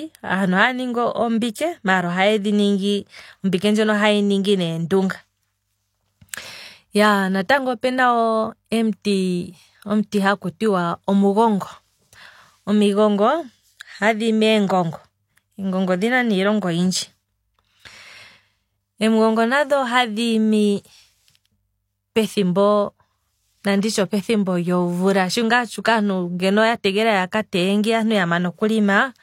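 At 1.54 s in this speech, pre-echo appears. The codec spread quantisation noise across its block, so a short hiss of about 10 ms precedes a sharp attack.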